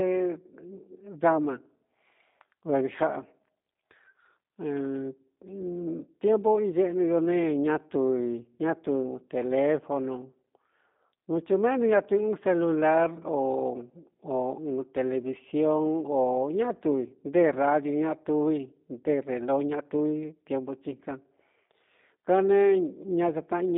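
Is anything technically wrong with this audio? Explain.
Yes. Throughout, the speech carries G.729 codec damage: rebuilt from a vocal tract model and sparse pulses, consistent with 8 kbit/s, it sounds rough and synthetic. Nothing passes above 3.7 kHz, unlike a plain telephone filter, which narrows the band without this buzzy roughness.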